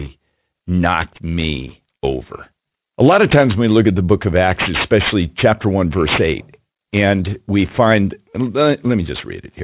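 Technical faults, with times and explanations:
Throughout, aliasing: the speech was brought down to a lower sample rate with no filtering first, which fits a drop from 44.1 kHz to 8 kHz. Everything above the new 4 kHz limit folds back below it at wrong, unrelated frequencies, about 15 dB under the speech, so sibilants sound gritty and metallic. A spectrogram shows energy running hard up to a sharp 4 kHz edge, with mirrored, downward-sloping traces where rising sibilant energy has been reflected.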